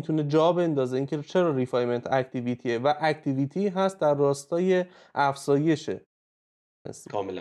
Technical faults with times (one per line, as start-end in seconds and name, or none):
6.30-6.85 clipped start after a pause